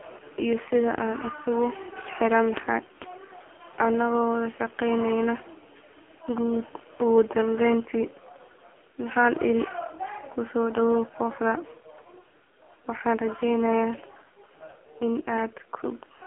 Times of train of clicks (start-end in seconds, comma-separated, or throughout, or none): none